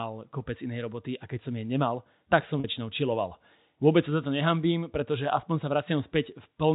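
At 2.6 s there's a brief packet loss with pitch repetition: about 40 ms, likely two 20 ms packets, gets bridged by repeating the last pitch period, so the speech holds slightly with a buzz.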